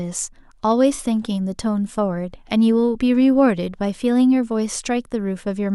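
At 0.94 to 1.00 s the speech has AAC frame loss with concealment: about 43 ms of data, which fits two lost frames, was patched from the last good spectrum. Unlike a clean dropout, the gap isn't silent; it comes through as a brief smeared, noisy, phasey patch.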